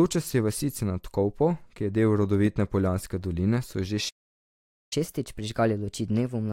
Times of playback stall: 4.09-4.93

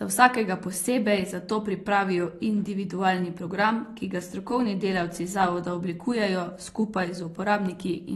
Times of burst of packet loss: none

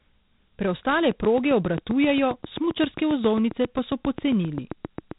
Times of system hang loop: none

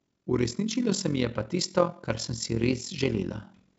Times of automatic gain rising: 0.27-3.39

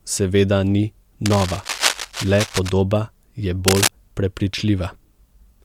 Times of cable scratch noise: 1.26-2.69, 3.68-3.90

